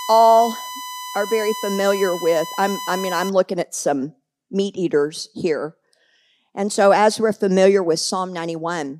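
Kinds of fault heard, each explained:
USB whine: A steady, fixed-pitch whine at 1 kHz sits under the speech from the start until about 3.29 s, and it is loud, around 10 dB below the speech itself. The pitch matches the 1 ms frame rate of a USB bus. Each frame pulls a burst of current, and that rhythmic draw leaks into the audio through shared power or ground wiring, becoming an audible tone while the interference lasts.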